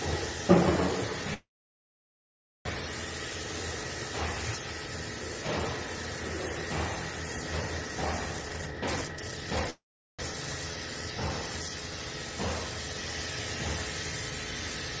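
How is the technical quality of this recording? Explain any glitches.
The recording has three audible glitches: two stalls and one rushed passage. It carries a call codec's coding noise, and nothing is heard above 8 kHz, which fits a wideband codec such as G.722.

From 1.34 to 2.67 s there is a call audio freeze. The sound trails off as a fading buzz and then goes silent for about 1.2 s. The likely cause is held-up packets draining the jitter buffer. When the audio returns, it resumes where it stopped. Nothing is lost, but a gap of about 1.3 s has been inserted.

From 8.38 to 9.70 s there is a jitter buffer speed-up. The receiver trimmed many short pitch-period slices to shed excess delay. Playback runs at about 175% speed with unchanged pitch and sounds hurried. Roughly a second of audio disappears.

From 9.70 to 10.21 s comes a second freeze of about 0.49 s. It has a brief fading tail and about 0.4 s of silence, then the audio resumes intact.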